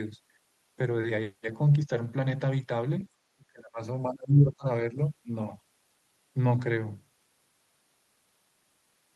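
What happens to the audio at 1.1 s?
Nothing goes wrong at 1.1 s: the speech passes intact through the WebRTC call path, with no dropout, click or distortion at that moment.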